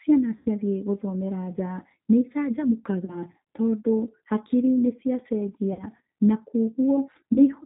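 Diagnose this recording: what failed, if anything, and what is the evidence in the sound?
The codec stage is the source of the constant damage. The speech has been through the G.729 codec, and the sound fits its 8 kbit/s G.729A mode. Nothing above 4 kHz survives, and the frame-by-frame pulse-and-filter rebuilding gives the voice a plainly rough, synthetic edge throughout.

The network dropped packets, and the decoder's VoIP packet loss concealment covered the gaps. It extended the last pitch and filter at falling gain, producing buzzy, fading stretches at 0.37–0.48 s (90 ms lost, fitting three packets), 3.05–3.21 s (30 ms, just before "tondũ hakiri nĩ"), 5.73–5.85 s (60 ms) and 7.33–7.40 s (30 ms). Each stretch lingers weakly past the loss as the decoder recovers.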